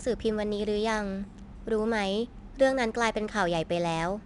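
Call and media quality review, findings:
4-bit ADPCM compression, whole clip. Gritty hiss riding on louder speech, smeared consonant attacks where step size lags. Likely low-rate legacy codec; nothing above 10.6 kHz, fitting a bitrate near 89 kbps. Spectrogram: level-tracking noise floor, hard ceiling at 10.6 kHz. Waveform: jagged onsets.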